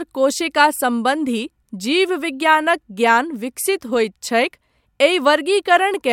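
No technical faults are audible.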